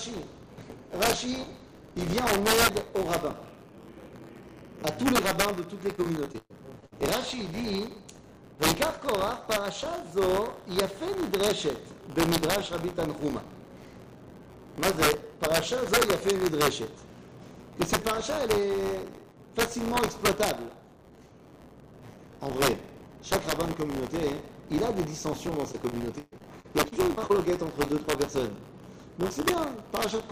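Integer overflow runs through the whole clip. The signal is pushed about 5 dB past full scale, and instead of being limited, the peaks wrap around to the opposite sign. Only a small fraction of samples, roughly half a percent, cross the limit. But each one flips across the entire range, so the loudest moments produce violent, sharp cracks that are far harsher than ordinary clipping.

Buffer tearing is also present from start to finish. The software writing the ring buffer and the hardware reading it have drifted, so their positions cross inside each period. A small slice of every buffer, around 7 percent, holds audio from roughly 20 ms earlier, with hard joins on either side. The repeated discontinuities produce a steady rattling buzz at 100 Hz that rides along whenever sound is playing.

Repeated packet loss (robotic sound) first hits from 5.95 to 6.93 s. A string of closely spaced holes, 280 ms missing in total with the longest 116 ms, is each patched by stretching the preceding sound. 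About a quarter of that stretch is concealment, so the audio turns choppy, with pieces missing. The same fault returns from 25.47 to 27.31 s, with 400 ms lost and the longest hole 135 ms, giving a similar choppy, broken texture.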